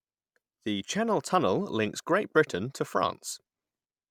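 No technical faults are audible anywhere in the recording.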